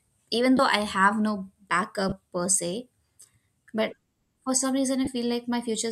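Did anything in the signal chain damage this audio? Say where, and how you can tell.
Yes, at the Bluetooth link, lost LE Audio frames at 0.57 to 0.59 s, 2.09 to 2.12 s just before "per se", and 5.05 to 5.07 s right after "for some". The gaps of 20 and 30 ms fit two or three 10 ms LC3 frames. Unlike a plain dropout, they don't go silent or click. The decoder filled them by replaying the previous spectrum with scrambled phase, which turns the sound into a brief, noisy smear.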